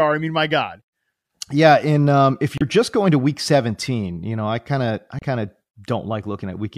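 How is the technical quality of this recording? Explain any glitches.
Two short glitches mar the speech, both caused by damaged data in a compressed stream. At 2.58 to 2.63 s and again at 5.19 to 5.24 s, corrupted bytes made the decoder misread its frames and lose sync, producing a brief glitch of about 50 ms each time.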